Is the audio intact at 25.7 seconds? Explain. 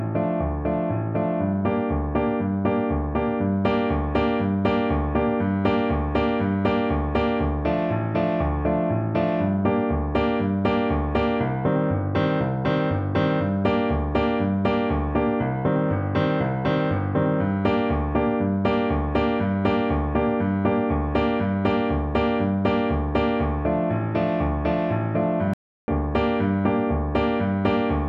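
No. At 25.7 seconds the audio is in the middle of a playback stall that runs from about 25.54 to 25.88 s, a gap of roughly 345 ms. The sound stops abruptly mid-flow and the output goes silent, then resumes once the gap ends. This is most likely the player running out of buffered data, or its playback thread being held up, so nothing reached the output until it recovered.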